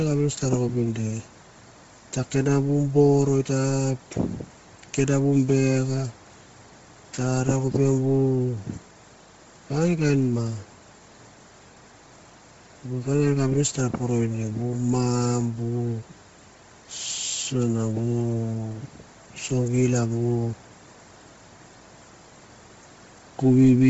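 Speech throughout, and the whole thing is heavily smeared by codec damage: nothing above about 7.7 kHz, with a breathy, grainy noise-filled edge on the upper band. That points to Bluetooth LC3 compression as the likely cause, which fits a low bitrate around 24 kbps with short 7.5 ms frames.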